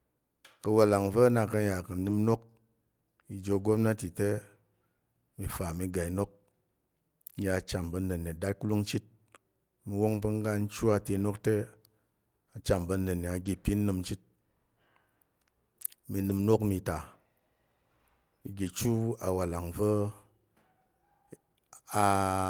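Lost packet rebuilt from error correction at 1.99–2.13 s, 13.45–13.47 s (just after "a cham pa̱ nənne", before "ipin nəm chit"), 16.21–16.43 s (before "inok mi ta") and 18.65–18.67 s (before "chu awalang"). Each lost stretch was replaced by a low-bitrate copy carried in the following packet, so there is no gap but a briefly rougher, noisier texture. The rebuilt lengths are 80 ms, 20 ms, 120 ms and 20 ms. Short concealed packet loss at 13.43–13.47 s overlaps the second of these. There, 20 ms never arrived, and the decoder extended the preceding sound before blending back, heard as a brief smear.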